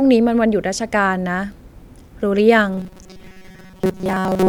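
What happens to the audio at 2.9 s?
At 2.9 s the speech is a rigid, metallic buzz near 188 Hz that only loosely follows the words, from 2.73 s to 4.49 s. This is robotic sound from repeated short buffers, likely from audio arriving too seldom: a roughly 5 ms fragment repeats while most real audio is skipped.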